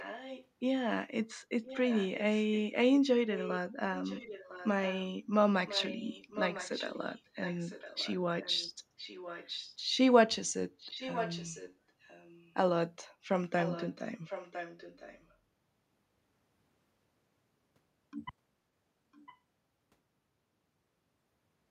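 A second copy of the speech trails the talker by about 1.0 s at 0.0–0.47, 1.63–2.59, 3.34–3.58, 3.95–5.04, 5.66–9.75, 10.8–12.54, 13.61–15.35 and 19.12–19.37 s. It sits roughly 10 to 15 dB under the speech, dropping to about 25 dB under near 19 s. This is echo leak, likely from a far-end loudspeaker whose echo canceller let part of the microphone pickup escape and return a second later.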